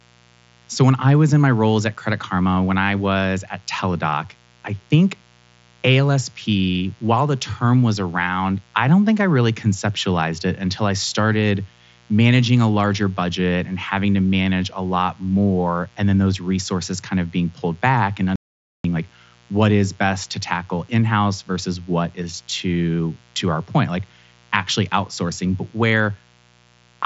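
From the first second to the end, a mains buzz runs under the speech, sitting roughly 35 dB below it. Sharp switching spikes from a dimmer, rectifier or unshielded lead are entering at twice each 60 Hz cycle, giving a steady, raspy edge. On a spectrogram it shows as evenly spaced horizontal lines at multiples of 60 Hz, stacked up to the 7.7 kHz ceiling of the mSBC Bluetooth headset band. The lines stay present even in pauses.

At 18.36 s, right after "being pulled back and", there is an audio dropout to silence lasting about 0.49 s, until 18.84 s, where the speech resumes with "like what is best". The input was likely lost briefly through a link failure or disconnection while silence kept being written, so even the buzz and room tone vanish. The waveform goes dead flat, and the spectrogram shows a fully blank vertical stripe with hard edges on both sides.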